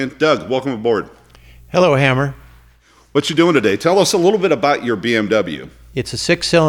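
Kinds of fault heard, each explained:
Drift correction step: From 4.07 s to 4.89 s the speech suddenly runs about 6.3% fast. Its pitch rises by 106 cents, roughly a semitone, for that stretch. Then both speed and pitch snap back to where they were. The likely cause is clock-matching software. It would have stepped the playback rate up once to drain a buffer that had filled as two clocks drifted apart. Speed and pitch move together because it changes the rate rather than shifting pitch alone.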